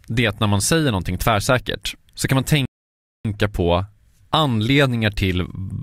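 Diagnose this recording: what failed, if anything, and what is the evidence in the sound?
A rebuffering stall at the playback stage: right after "tvärsäkert så kan man" the speech drops to dead silence from 2.65 to 3.25 s, then resumes exactly where it stopped. The player starved for data, adding 0.59 s with nothing lost. Waveform shows a flat line; spectrogram, a blank vertical band.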